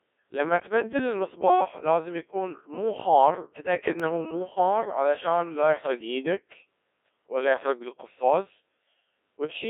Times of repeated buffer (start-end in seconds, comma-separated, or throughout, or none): 4.00